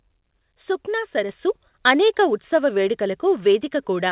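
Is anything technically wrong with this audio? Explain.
Yes. At 1.29 s, the microphone volume stepped up. The call software judged the input too quiet and raised the device's capture level in a single jump of about 5 dB, so the speech and the background noise beneath it grow louder together, abruptly and mid-stream, on an audio path whose content stops at 4 kHz.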